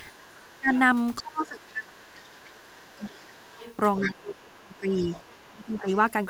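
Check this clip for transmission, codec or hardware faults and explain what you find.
Two echo-canceller faults run through this speech clip, overlapping in time.

Other side's voice leaking through, at 0.13–0.79, 1.6–1.7, 2.2–2.7, 3.04–4.22 and 4.72–5.4 s: far-end speech, about 15 to 35 dB below the talker, likely from incomplete echo cancellation. It shows as weak, separate harmonic traces in the spectrogram.

Speech suppressed in double talk, at 0.15–0.7, 1.21–3.52 and 4.05–5.88 s: the talker ducks by up to about 35 dB, likely because the canceller attenuated both voices during overlap. The waveform shows sagging envelopes.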